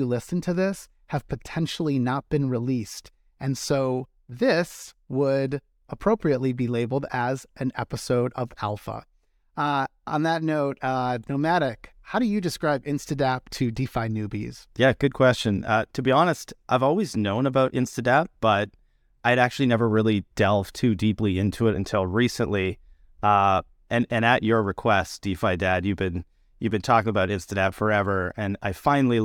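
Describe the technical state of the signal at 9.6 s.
At 9.6 s the speech signal is intact, with no audible technical fault at that moment.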